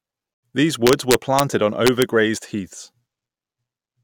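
It's a speech clip with two separate problems. Right near the start, between 0.34 and 0.43 s, the sound just cuts out for about 85 ms and then picks up further along, as though it kept playing during the gap. That's likely a Bluetooth dropout: packets didn't reach the headphones in time, so the output went silent until good ones came through again, which fits roughly four lost frames. The second problem is integer overflow, from 0.87 to 1.40 s and again from 1.87 to 2.02 s. The signal is pushed about 2 dB past the integer limit, and instead of being held there it wraps around to the opposite sign. Every peak that crosses the line flips across the full range, so you hear harsh, violent cracks on the louder parts, much sharper and nastier than ordinary clipping would sound.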